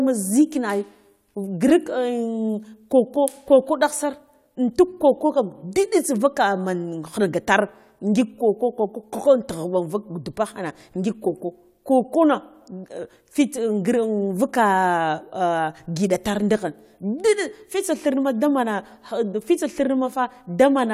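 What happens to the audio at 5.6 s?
Nothing goes wrong at 5.6 s; the speech carries on intact through that moment, with no dropout, click or distortion to be heard.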